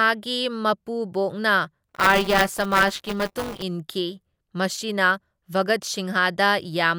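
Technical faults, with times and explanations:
1.88–3.62 s, buffer tearing: the program filling the playback ring buffer and the hardware reading it have drifted out of step and cross inside every period, so a small slice of each buffer, roughly 15%, still holds audio from about 15 ms earlier, butted against current sound with hard joins. The result is a rattling 200 Hz buzz riding on the speech, which fits a 5 ms buffer period. A waveform shows steps every 5 ms, and a spectrogram shows evenly spaced vertical striations.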